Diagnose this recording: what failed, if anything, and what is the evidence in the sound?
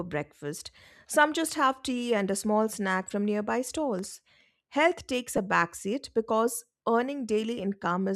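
The failure is at the codec stage, in the Bluetooth LE Audio link: lost LE Audio frames. At about 5.37 s the speech briefly turns into a grainy, noisy smear, roughly 10 ms long, which fits a single dropped frame. The LC3 decoder had nothing to decode there, so it filled the gap by reusing the previous frame's spectrum with randomised signs. That keeps the overall level and tone colour but scrambles the waveform, which is why you hear a brief hiss instead of a clean click or silence.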